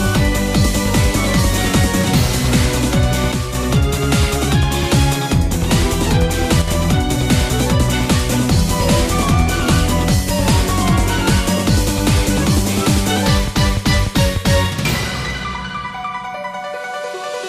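A stereo channel likely drops out at 3.32–3.55 s and 6.62–6.68 s, so after the mono sum the sound abruptly falls by about 6 dB.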